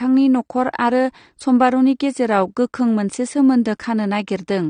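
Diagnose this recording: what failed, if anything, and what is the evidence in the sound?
AAC compression throughout, codec stage: nothing above 9.7 kHz and plainly dull, smeared speech, likely from AAC-LC dropping high bands to fit roughly 32 kbps.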